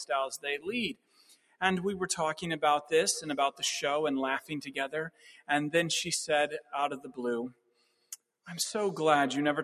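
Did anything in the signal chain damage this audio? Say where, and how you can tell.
Yes. The damage is at the call-processing stage: a noise suppressor tuned for speech was left on this non-speech sound. It keeps mistaking sustained material for noise, so the level swings by roughly 15 dB, giving that pumping, thinned-out feel throughout.

The clearest sound cut by the noise suppressor is at 0.34–0.69 s, 0.88–1.62 s, 4.41–4.73 s, 5.10–5.49 s, 6.99–7.14 s and 7.50–8.22 s. Each held portion sinks by about 12 to 21 dB, with the longest stretches dropping deepest, while sharper onsets survive.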